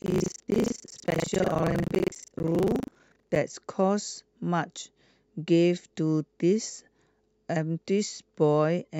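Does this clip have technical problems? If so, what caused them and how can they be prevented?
Yes. From 0.0 to 3.37 s there is buffer tearing: the program writing the ring buffer and the hardware reading it have slipped and cross inside every period. Roughly a third of each buffer replays speech from about 70 ms earlier, producing a rattling 25 Hz buzz. Keeping the writer and reader positions synchronised, with enough headroom that writes never pass the read point, prevents it.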